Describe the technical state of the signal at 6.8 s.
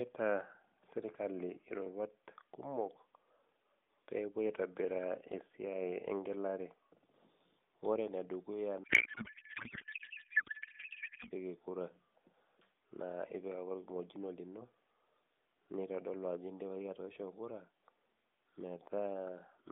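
At 6.8 s the audio is intact, with the speech carried cleanly through the narrowband mobile line, whose light AMR-NB coding at 12.2 kbps keeps the band to roughly 150 Hz to 3.6 kHz.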